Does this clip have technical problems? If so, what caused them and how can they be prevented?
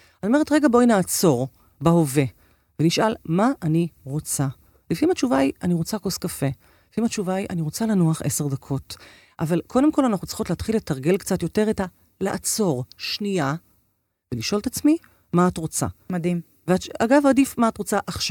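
No, nothing in this speech recording stands out as a technical problem, so there's nothing here that needs fixing or preventing.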